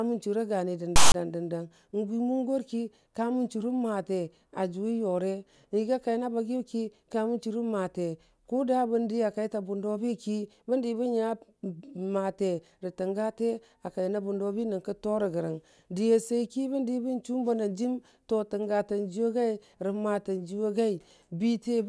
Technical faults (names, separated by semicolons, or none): file tags played as audio